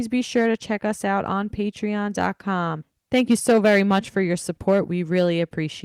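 Harsh crackle catches the speech peaks at 0.36–0.50 s, just before "to check us out", and again at 2.19–2.27 s. A sustained fuzz follows at 3.14–4.17 s, with short crackles at 4.68–4.80 s and 5.17–5.28 s. This is hard clipping: the peaks overran the signal path by about 2 to 8 dB, worst in the long stretch, and were sliced flat, spraying high harmonics.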